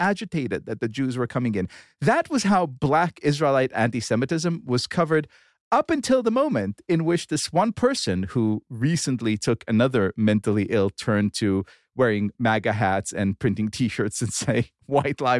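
Nothing stood out as a technical problem on listening to this speech clip.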